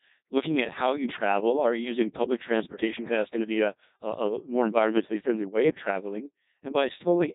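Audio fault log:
Throughout: Codec 2 vocoder. The speech has the robotic, buzzy character of a parametric vocoder, consistent with Codec 2 at a very low rate, around 1.2 kbit/s. Only pitch, voicing, energy and a coarse spectral envelope survive, and the decoder rebuilds the voice from summed sine waves, so the original waveform detail is gone. Damage is heavy: the timbre is synthetic, and nothing is present above 3.8 kHz.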